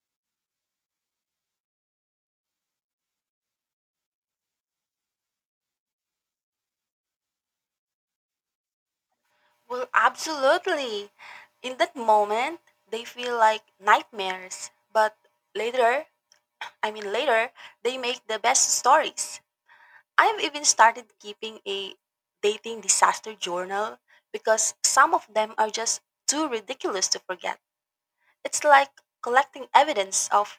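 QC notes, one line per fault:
Nothing stood out on listening to this speech recording.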